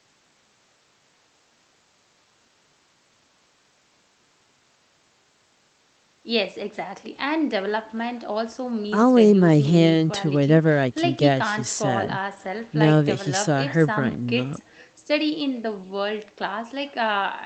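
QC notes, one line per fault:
throughout, echo with no canceller: faint copy of the speech trailing around 0.4 s behind, about 28 dB down, from the far end's speaker leaking back uncancelled.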